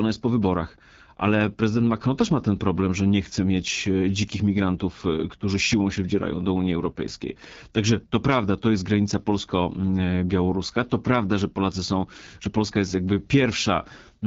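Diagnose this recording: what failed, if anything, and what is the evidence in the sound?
The failure is at the codec stage: the whole speech track has that rough, raspy, buzzy texture of an AMR wideband (HD Voice) codec starved of bits, which fits its 8.85 kbit/s mode. At that rate the pulse-excited vocal tract model can't track detail, and everything above 6.4 kHz is just shaped noise.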